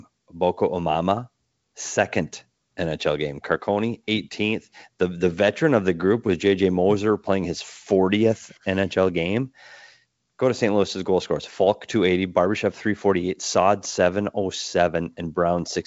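Nothing stood out on listening to this speech, which is carried over G.722 wideband telephone coding at 64 kbit/s with nothing above 7.8 kHz.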